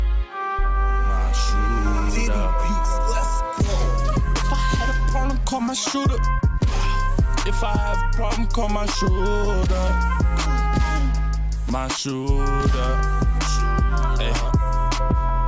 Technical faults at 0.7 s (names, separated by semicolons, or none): none